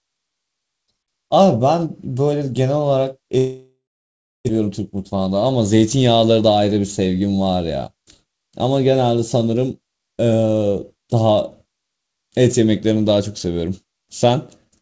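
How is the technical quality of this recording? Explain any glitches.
The recording has two glitches close together, around 3.4 to 5.3 s, heard through a call path whose audio stops at 8 kHz, which fits a G.722 wideband codec.

Long network dropout, 3.38 to 4.51 s: audio likely stopped arriving, so about 1 s of sound is lost. The receiver stretches the last sound into a fading buzz, then about 0.66 s of near-silence follows before the sound resumes past the missing part.

Jitter buffer speed-up, 4.58 to 5.28 s: the late audio piles up, so the receiver trims short pitch-period pieces, roughly 70 ms in total. The sound plays about 109% fast at unchanged pitch, giving a brief hurried feel.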